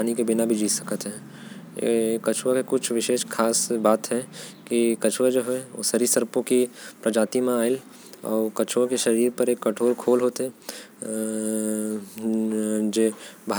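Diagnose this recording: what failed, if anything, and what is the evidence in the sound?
Nothing failed: no fault can be heard anywhere in this speech recording.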